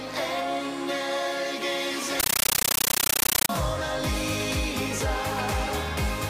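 From 2.20 to 3.49 s, a compressed stream is played as audio: undecoded AC-3 becomes loud chattering static, 13.3 ms bursts 31 times per second.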